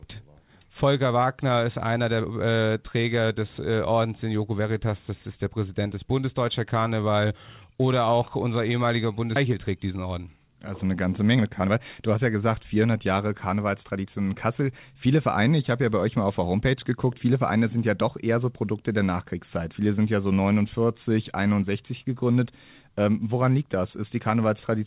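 At 9.36 s, just after "auch unser ehemaliger", the speech skips ahead: about a second of audio is missing, and the two sides are spliced together with no silence between them. Unlike a dropout, which leaves an audible gap or a concealment hum, this is a clean jump forward in the speech. It is typical of a receiver that discarded a backlog of audio that was already queued, cutting the delay by roughly a second at once.

From 9.46 s to 14.07 s comes a jitter buffer speed-up. The talking runs at about 112% of normal rate while the pitch stays where it was, so the voice sounds hurried rather than higher. That unchanged pitch distinguishes it from a resampling or clock error. The buffer had filled beyond its target, and the receiver removed short pitch-period pieces repeatedly, taking out about half a second in total. Across the clip, the narrowband call path leaves nothing above 4 kHz.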